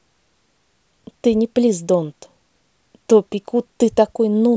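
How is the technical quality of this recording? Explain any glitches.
Nothing here sounds off to me, and there are no glitches in the recording to point to.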